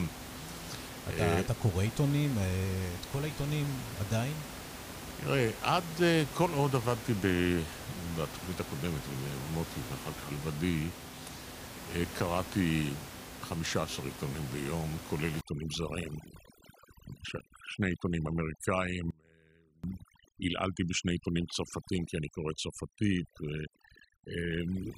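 Overdone noise removal runs from 15.41 s to the end of the clip. The noise reduction was set too strong: it pushes individual frequency bands far down or shuts them off whenever they sit close to its estimate of the noise, and quieter parts of the speech are removed along with them. The room noise, which sits about 11 dB under the speech before this point, drops away and breaks into twinkling, warbling specks.

An audio dropout to a faint residue follows from 19.11 s to 19.84 s, lasting 0.73 s. The speech cuts out abruptly, not as a pause or a fade, and returns just as suddenly. The gap does not go silent. It still holds a faint sound, around 30 dB below the normal signal level. The likely cause is that the wanted signal was lost for that stretch while the path after the break stayed live.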